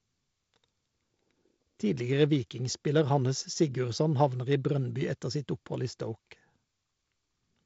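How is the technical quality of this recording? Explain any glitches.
No glitches turn up here; the speech comes through as G.722 wideband telephone audio, with the usual light upper-band hiss and nothing above about 7.7 kHz.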